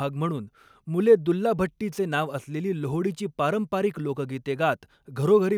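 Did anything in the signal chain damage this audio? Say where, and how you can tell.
No, nothing in this speech recording stood out on listening as damage from any stage of the signal chain.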